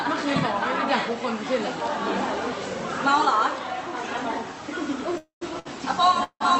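From 5.17 to 5.43 s there is a call audio freeze. The last sound carries on as a fading buzz or hiss, then about 130 ms of silence. Packets were likely held up and the jitter buffer ran dry. The audio resumes where it stopped, about 240 ms late.

From 5.59 to 5.67 s comes a short stall from a late packet. A packet missed its slot. The last sound is stretched for 60 ms with a slight buzz or dip. Nothing is lost.

From 6.24 to 6.42 s a second call audio freeze follows. A fading buzz or hiss gives way to about 70 ms of silence. Delayed packets likely emptied the buffer again. Playback picks up intact, about 170 ms later.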